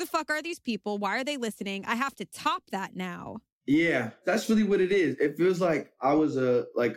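Listening to the speech from beginning to end, nothing stood out as a technical problem.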